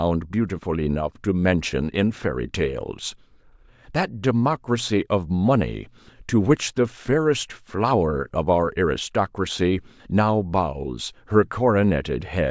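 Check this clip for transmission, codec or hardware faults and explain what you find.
No faults found in this speech recording; nothing audible needs attention.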